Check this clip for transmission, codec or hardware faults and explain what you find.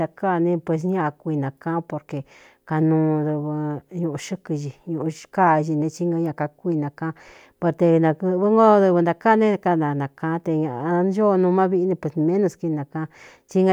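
No transmission, codec or hardware faults can be heard in this speech recording, and the signal comes across as technically intact.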